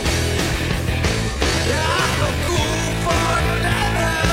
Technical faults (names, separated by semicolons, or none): time-stretched section